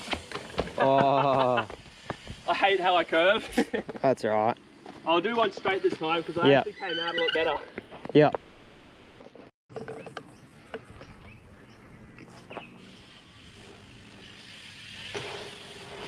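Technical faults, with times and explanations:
8.35–9.23 s, call audio freeze: the last sound is drawn out into a fading buzz or hiss for about 850 ms, then the audio resumes exactly where it stopped with nothing lost. This is likely an empty jitter buffer while packets were held up, adding a gap.
9.68–9.72 s, skip ahead: playback jumps forward with only a tiny join, and roughly 0.4 s of audio is simply gone. A stretch was dropped while later audio was already queued, so the two sides butt together almost directly.
9.74–12.14 s, jitter buffer slow-down: the audio runs at 85% speed with unchanged pitch, sounding drawn out. The receiver repeated single pitch periods over and over, adding 358 ms to build up a buffer reserve.
13.51–16.07 s, jitter buffer speed-up: the audio runs at 131% speed at the same pitch and sounds hurried. With too much audio buffered, the receiver kept cutting out short pitch-period pieces, removing roughly 0.7 s to bring the delay down.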